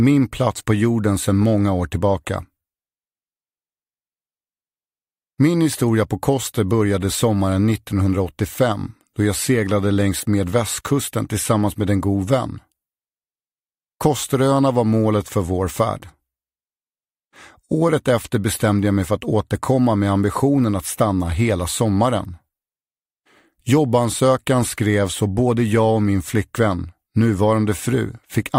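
No technical fault can be heard anywhere in the signal; it holds steady in level, timing and tone throughout.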